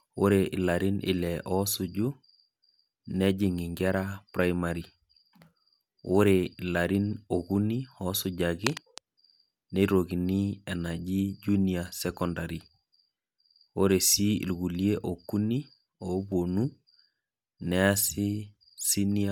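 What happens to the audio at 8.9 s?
A worn cable or connector was likely being moved, making its contact resistance jump around rapidly, and that is cable scratch noise. From 8.64 to 9.00 s, so spanning 8.9 s, dense and uneven bursts of crackle ride on top of the speech, sitting roughly ten decibels below it. For that short stretch the speech sounds as if it is being scratched or rustled over, with the disturbance stopping just before 9 s.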